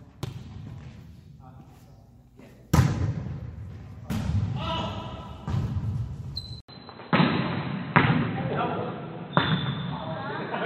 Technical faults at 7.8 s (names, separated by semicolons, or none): input switched to a poorer device